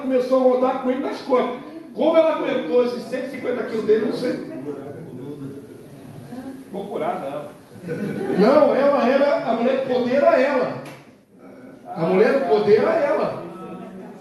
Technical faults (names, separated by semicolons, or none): none